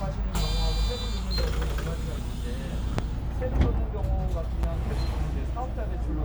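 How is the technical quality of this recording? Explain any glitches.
The recording is marred by loud pops at two points. Between 2.99 and 3.01 s there is a single sharp pop, roughly 20 dB above the surrounding sound. From 4.63 to 4.88 s comes a pair of weaker pops, about 10 dB up. These are most likely voltage spikes from a switch, connector or static discharge, shaped by the downstream circuitry. The sound continues underneath each one. On a waveform each pop shows as a tall, isolated spike. A spectrogram shows a thin, full-height vertical stripe.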